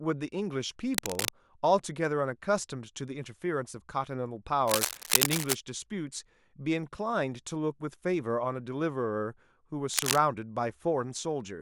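Dense, uneven scratching and rustling breaks over the speech three times: from 0.94 to 1.29 s, from 4.67 to 5.56 s, and from 9.91 to 10.18 s, the middle burst lasting nearly a second. Each is roughly as loud as the speech itself. This is cable scratch noise, likely from a worn cable, connector or control being moved, so its contact resistance jumps rapidly and injects ragged noise into the signal.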